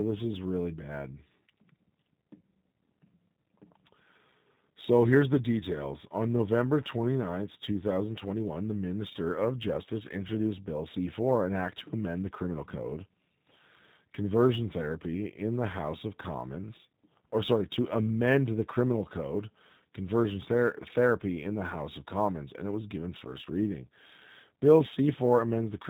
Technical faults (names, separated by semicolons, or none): G.729 codec; sample clock jitter